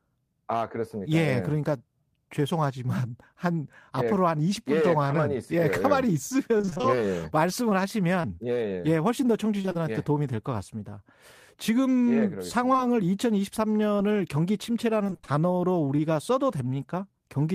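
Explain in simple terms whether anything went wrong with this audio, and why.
Yes, the call lost bits of audio along the way. Repeated packet loss (robotic sound) hits from 6.57 to 6.86 s, 9.61 to 9.76 s and 15.04 to 15.33 s. Small chunks kept going missing, and the gaps were patched, so the speech turns choppy and robotic.

Short concealed packet loss occurs at 8.22 to 8.25 s, 12.72 to 12.80 s, 13.96 to 14.00 s and 15.96 to 16.00 s. A tiny piece was lost and filled in, leaving a brief smear or wobble.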